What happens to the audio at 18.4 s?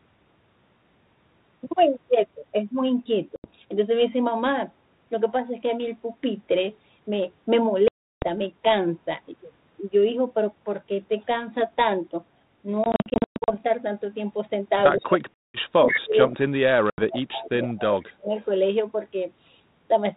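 A brief echo leak runs from 18.39 to 18.45 s: a faint copy of the talker returns about 126 ms late, about 35 dB below the speech. The likely cause is a far-end speakerphone whose echo canceller let a scrap of its microphone pickup back into the call. Unlike room reverberation, it is one distinct delayed repeat, not a smooth tail.

It follows the speech suppressed in double talk from 15.69 to 18.34 s, where the talker's level dropped by as much as about 40 dB in pieces, adding up to about 2 seconds. That section is missing sound, whereas the echo leak adds sound.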